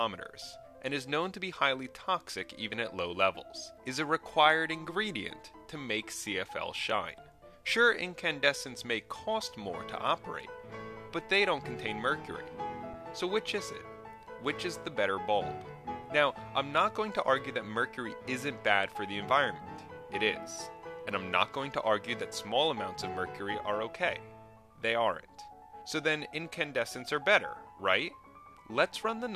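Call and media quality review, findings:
Underrun with held sample, output buffer. Two brief freezes: 12.94 s (5 ms) and 23.27 s (about 2.8 ms). The playback buffer ran dry and the DAC held its last sample value. No audio is dropped, and playback resumes where it paused, so each pause ends with only a soft edge, not a sharp click. Waveform: short flat line at the held level. Spectrogram: thin vertical gap with faint edges.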